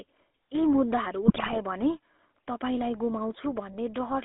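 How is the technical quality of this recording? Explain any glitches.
Technical quality is poor. The speech carries plainly audible codec colouring from start to finish, plus one short burst of corruption.

The GSM full-rate codec is present throughout. It rebuilds the speech from a vocal-tract model driven by sparse pulses, within roughly 250 Hz to 3.6 kHz. The result is a buzzy, gravelly roughness rather than the clean muffling of simple band-limiting.

GSM bit errors occur from 1.24 to 1.57 s. Corrupted filter, pitch and gain values warp successive frames into squawks, pops and gargling. Unlike packet dropouts, the sound doesn't go silent or repeat; it is mangled.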